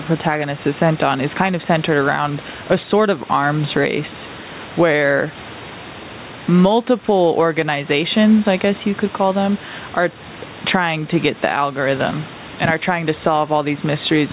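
Gain pumping runs through the whole speech clip. The room noise sits about 29 dB below the speech, and the gain swings by around 10 dB. The likely cause is input gain set far too high for the microphone, so a fast limiter or compressor clamps down on every peak and releases in the gaps. Loud and soft passages end up squeezed close together in level, giving a flattened, breathing quality over the narrow band that stops near 4 kHz.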